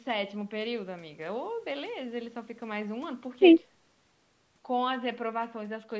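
Nothing's wrong with this speech recording: it has simply gone through a call's microphone processing, which trims the deepest bass and leaves nothing above 8 kHz, just as that path normally does.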